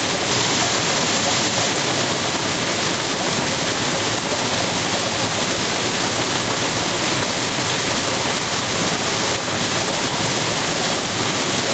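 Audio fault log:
Nothing to flag here; the audio just runs through an ordinary call path, with the top end stopping around 8 kHz as you'd expect from that route.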